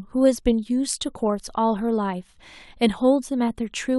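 No technical faults can be heard anywhere in the speech. Nothing marks a point where the recording or transmission went wrong.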